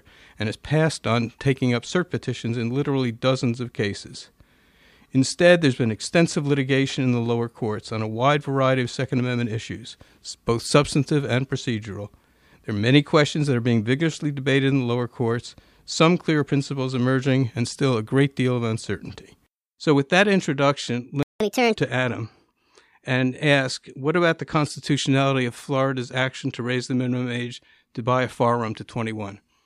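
Playback stall at 21.23 s, just after "with that introduction": the speech drops to silence for about 0.18 s, likely because the player ran short of data before recovering. Catch-up at higher speed follows from 21.40 to 21.76 s: the backlog plays at 1.5 times normal rate, lifting pitch roughly seven semitones.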